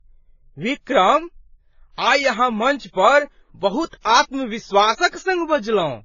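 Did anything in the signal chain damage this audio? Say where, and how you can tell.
Yes. Transcoding between lossy codecs is audible throughout, at the codec stage. Nothing sounds above 7 kHz, and smeared low-bitrate artefacts sit beneath a second codec's grain, which fits a likely 16 kbit/s AAC encode re-encoded as 64 kbit/s WMA. The higher rate cannot restore what was lost.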